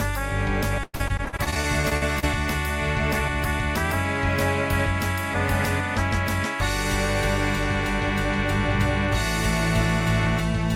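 From 0.83 to 2.25 s there is repeated packet loss, producing a robotic sound. Short holes follow one after another, the longest about 100 ms. Each is patched by stretching the last sound, so roughly a third of this stretch is concealed filler. The result is choppy, with pieces missing. Unlike a single dropout or one smeared concealment, the damage recurs rapidly across the whole span, giving a stuttering mechanical texture rather than one isolated gap.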